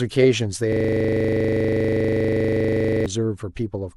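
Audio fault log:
0.73–3.06 s system hang loop: a 25 Hz buzzing stutter as one 40 ms slice repeats exactly, because the frozen system left the hardware cycling the same buffer.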